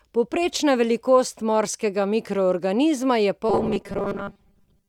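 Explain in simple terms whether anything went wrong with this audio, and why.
From 3.49 s to the end at 4.89 s, the speech turns into a stiff, metallic 200 Hz buzz: robotic sound from repeated short buffers. About half of it is likely a replayed 5 ms snippet.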